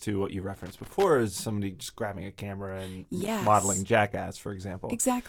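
A speech recording with two bursts of loose connector crackle, from 0.54 to 1.04 s and from 3.21 to 3.47 s: a worn or dirty contact making and breaking, chopping the signal. The irregular, scratchy texture sets it apart from evenly spaced digital clicks.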